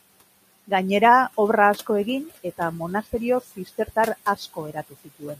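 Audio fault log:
Throughout: noise suppressor artifacts. The suppressor pulls bands it judges to be steady noise down by about 18 dB frame by frame. The room noise, about 20 dB under the speech, sinks in gaps and returns under syllables. On a spectrogram the noise floor flickers between dark gaps and grey patches.
3.56–3.97 s and 4.74–5.36 s: speech cut by the noise suppressor. Just after "asko egin eta monasterio", quiet speech was taken for noise and dropped by up to about 12 dB, then later by up to about 16 dB. The drops affect roughly a tenth and two tenths of a second, so the cut speech sounds swallowed. The waveform envelope shows sudden dips.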